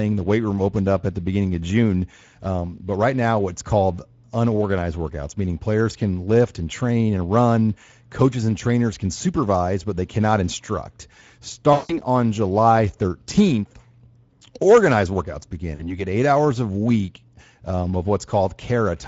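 Throughout the speech, the Speex codec leaves plainly audible damage. The voice sounds hoarse and grainy, which fits a mid-to-low setting of around 16.8 kbps. This CELP coder has too few bits to model the excitation faithfully, so noise replaces detail. On a spectrogram, the harmonic stripes look blurred and broken up, and noise fills the gaps between them. The waveform shows a rough, less periodic texture.

VoIP packet loss concealed by the speech codec appears first from 11.73 to 11.98 s, covering about 160 ms of lost audio. The decoder extends its last pitch and filter and lowers the gain step by step, so the sound is stretched out and fades. The spectrogram shows the last spectrum repeated and dimming, and the waveform shows a decaying, self-similar envelope. A shorter loss of about 40 ms follows at 15.75 to 16.05 s, between "organized workouts" and "eight hours a week". Because each decoded frame builds on the one before, the voice stays weak and smeared briefly after the gap.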